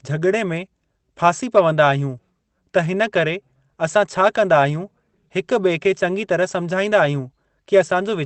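No faults in the speech; the top end rolling off near 8 kHz and the coding texture fit an Opus call path running at about 24 kbps.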